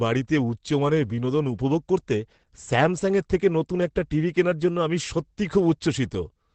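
Speech, with Opus voice compression throughout. Nothing reaches above 8.7 kHz, so the top is muffled. The coarse linear-prediction coding leaves a plainly hoarse, slightly robotic edge. That fits Opus in its SILK speech mode, wideband, at about 12 kbps.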